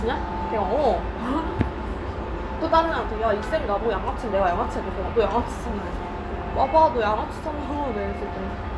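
Sound recording with no audible technical faults.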